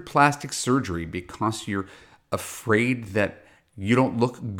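No technical faults can be heard anywhere in this recording.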